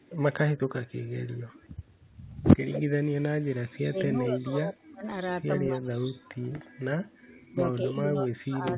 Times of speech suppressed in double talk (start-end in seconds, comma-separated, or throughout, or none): 3.88-5.04, 5.47-6.65, 7.51-8.77